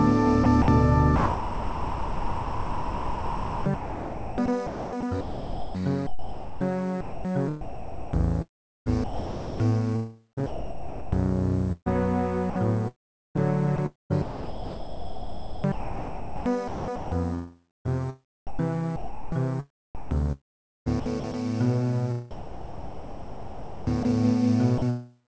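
From about 0.44 s to 13.4 s the sound keeps cutting in and out, with roughly 7.6 s of it swapped for a flat, hissy fill. Runs follow at 12.5 to 17.9 s (about 3.8 s replaced), 18.47 to 20.25 s, 19.95 to 21.34 s and 22.31 to 24.1 s. That's sound chopped by the voice detector: the sender's detector likely kept toggling transmission, swapping the sound for comfort noise.

At 24.78 to 24.82 s, a 40 ms sliver is replaced by comfort noise. That's sound dropped by the voice detector, likely mistaking a quiet bit for background. The call path runs through G.722, nothing above 8 kHz.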